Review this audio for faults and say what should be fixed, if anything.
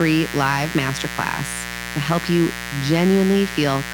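There's a mains buzz running under the whole clip, a raspy 60 Hz hum sitting only about 10 dB below the speech. Its sharp edges mean spikes twice per mains cycle, so harmonics stretch well up into the kilohertz range. Keep cables shielded, away from dimmers and power supplies, and properly grounded.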